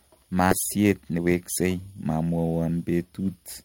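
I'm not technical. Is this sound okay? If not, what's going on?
No. A skip ahead happens at 0.51 to 0.53 seconds. About 0.7 seconds of speech was dropped and playback jumped straight to newer sound. The two sides are joined with no pause, so a chunk simply vanishes.

From 0.77 to 2.45 seconds there is a jitter buffer speed-up. Too much audio had piled up waiting to play, so the receiver repeatedly snipped out tiny slices. The speech runs about 16% faster at normal pitch and sounds hurried, losing roughly a third of a second overall.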